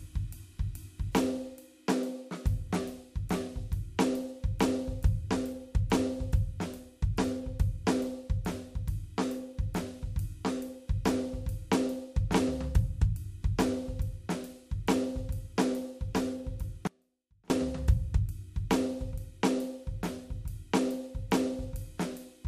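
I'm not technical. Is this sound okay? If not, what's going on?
No. At 16.87 seconds the music suddenly drops away for about 0.63 seconds, until 17.5 seconds, leaving only a faint sound far below its normal loudness. This is an audio dropout to a faint residue. The signal was likely lost briefly somewhere in the connection while the line stayed open. What sets it apart from a deliberate pause or a fade-out is how abruptly it cuts off and returns, with the music continuing mid-flow.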